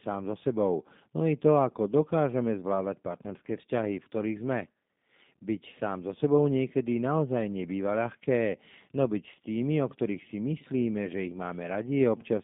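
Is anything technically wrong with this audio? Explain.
Yes. Throughout the clip, the speech carries G.729 codec damage. The sound is squeezed into roughly 150 Hz to 3.7 kHz, which fits an 8 kbit/s G.729A line. Each 10 ms frame is rebuilt from a vocal-tract filter, a pitch predictor and a few pulses, so it sounds plainly rough and synthetic. That roughness is what distinguishes it from a simple telephone band-limit filter.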